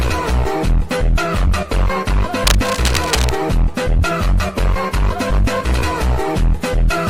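From 2.41 to 3.38 s, cable scratch noise cuts in: dense, uneven scratchy rustling sits roughly level with the sound, likely from a worn connector being moved.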